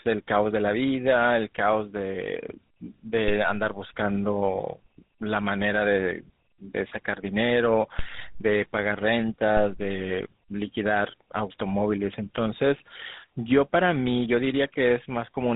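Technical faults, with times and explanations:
Throughout, tandem speech coding. The speech passed through a CVSD link at 64 kbit/s, then G.711 mu-law at 64 kbit/s, then GSM full rate at 13 kbit/s. It was decoded and re-encoded at each border. Two of these are speech codecs in a row. GSM full rate then coded audio already roughened by the CVSD stage. The errors stack, so the voice sounds rough, muffled and warbly. Nothing is left above about 3.9 kHz.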